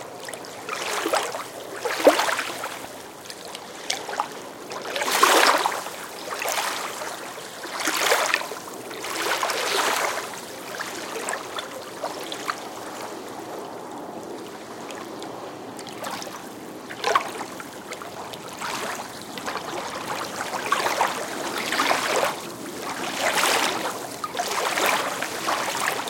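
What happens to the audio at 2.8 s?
A sudden voltage pulse, likely from a switch, plug, static or driver glitch, adds a single loud pop from 2.85 to 2.87 s, a few decibels above the ongoing sound.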